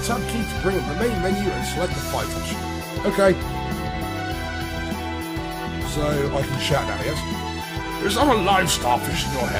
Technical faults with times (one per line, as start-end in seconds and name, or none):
none